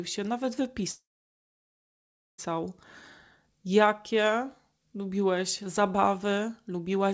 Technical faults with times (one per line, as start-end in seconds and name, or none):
0.92-2.40 call audio freeze